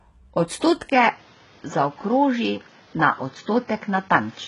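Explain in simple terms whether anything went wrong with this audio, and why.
Two things went wrong in this speech recording.

The first runs through the whole clip. The treble sounds artificial, and the s sounds come out gritty and lispy. That points to HE-AAC compression, likely at a very low setting. This kind of codec keeps only the lower part of the sound. It then fakes the top by copying lower tones upward. Here nothing is left above about 11.1 kHz, and the copied treble doesn't match the real voice.

The second happens at 0.90 s. There is a tiny gap of about 20 ms. Then the sound turns duller and boxier, with a new layer of background noise. The loudness stays about the same. This is the sound of the input switched to a poorer device, likely a different microphone or a headset. From that moment to the end, everything above about 6.8 kHz is gone.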